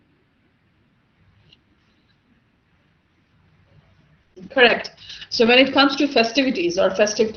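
Speech over an Opus call path at 20 kbps, band-limited to about 6 kHz, and things go wrong just past the four-second mark. First there's a burst of packet loss from 4.21 to 4.33 s. The receiver papers over roughly 90 ms by stretching out the last bit of sound and fading it, so you get that held, smeared tail. Then about 60 ms is simply skipped, and playback jumps ahead with a 30 ms delay shift as the jitter buffer catches up. Right on its heels comes a run of ten lost packets rebuilt from error correction, spread from 4.30 to 5.51 s, mostly about 120 ms apart with one longer 180 ms spacing, each covering 60 ms. There's no gap in any of them, because the decoder played the low-bitrate backup copy carried in the next packet. Those patches sound audibly rougher and grainier than the frames around them, giving a gritty flutter through that second or so, which ends just before "it comes to".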